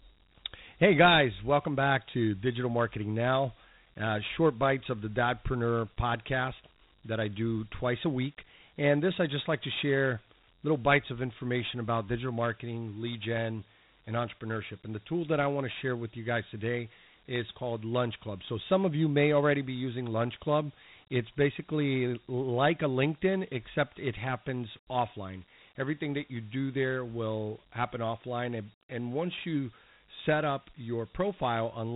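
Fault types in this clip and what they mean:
Dialogic VOX ADPCM: This is the old telephony voicemail format. Each sample is squeezed into a 4-bit step relative to a running prediction, so the coder can't track the waveform closely and leaves a gritty, grainy hiss riding on the speech, plainly audible here. The top end is gone, with nothing above about 3.9 kHz, which points to an 8 kHz rate. The rough texture fits a 32 kbps stream.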